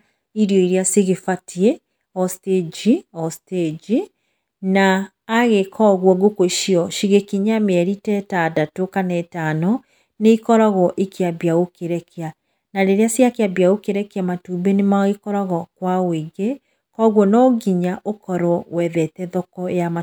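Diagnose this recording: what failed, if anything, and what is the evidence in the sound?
Nothing in the speech recording points to a failure at any stage of the chain, from capture and conversion through to storage and playback.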